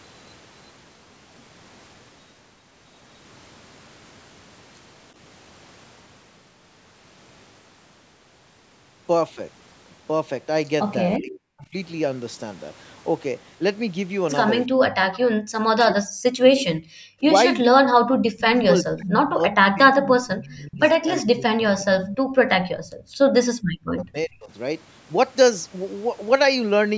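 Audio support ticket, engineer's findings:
Speech suppressed in double talk, 11.16–11.74, 14.67–18.03, 18.44–22.87, 23.62–24.5 s: speech dips up to about 40 dB in pieces, likely echo canceller attenuating near talker during simultaneous far-end talk.

Echo leak, 18.39–18.63, 19.07–19.55, 19.95–19.99 s: delayed copy of speech at 384 ms, about 10–20 dB down, likely residual loudspeaker echo passing the far-side canceller.

Background gated by the echo canceller, 23.15–23.27 s: room sound drops about 25 dB briefly while loudspeaker plays, then recovers. Canceller clamping the mic.

Call mic processing (band ends near 8 kHz) heard as normal.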